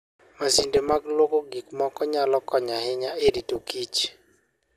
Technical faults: DAB burbling

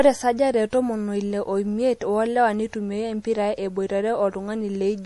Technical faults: MP3 compression

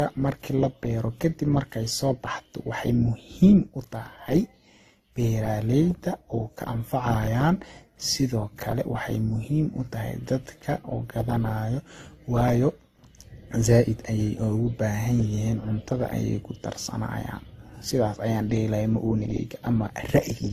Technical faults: transcoding between lossy codecs

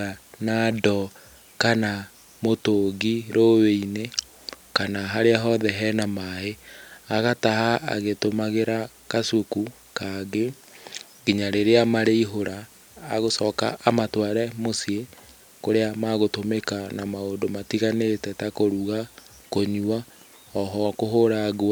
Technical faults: none

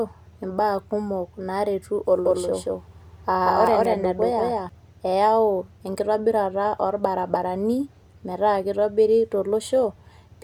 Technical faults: doubled audio track

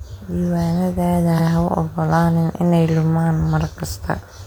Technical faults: repeated frames

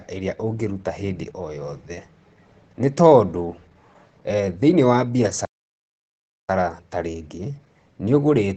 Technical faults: Opus voice compression; playback stall

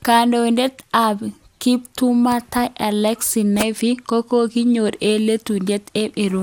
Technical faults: generation loss

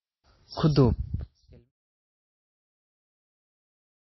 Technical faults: MP3 compression

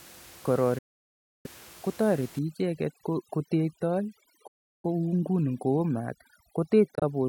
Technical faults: Bluetooth dropout; overdone noise removal

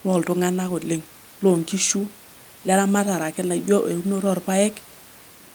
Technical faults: none

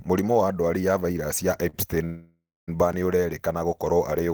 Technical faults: short stall from a late packet; call audio freeze; block of digital silence

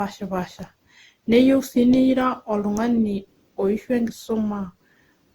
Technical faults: generation loss

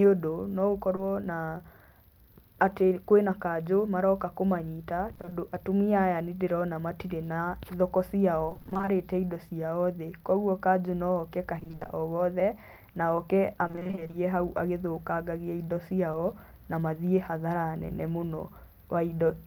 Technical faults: short concealed packet loss; repeated packet loss (robotic sound)

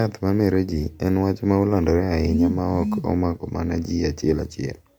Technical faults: generation loss

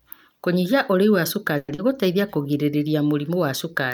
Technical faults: long network dropout; jitter buffer slow-down

